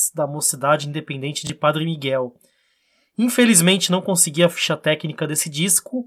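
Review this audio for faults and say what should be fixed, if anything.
A Bluetooth stutter occurs in the speech from 1.47 to 1.50 s. A packet arrived late or not at all, so the receiver repeated its last buffer, and speech resumes about 23 ms further on, consistent with one lost packet. Reduce link distance and 2.4 GHz interference.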